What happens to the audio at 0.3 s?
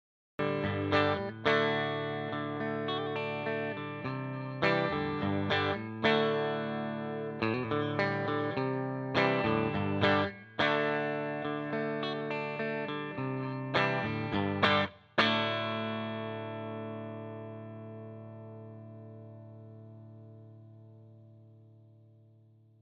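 At 0.3 s the audio is still in digital silence: a cut-off start, with recording beginning late, so sound abruptly appears mid-event at 0.39 s, showing as a flat waveform then a sudden full-level onset.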